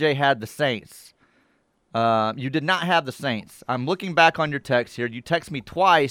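Speech recording, with no technical faults audible anywhere.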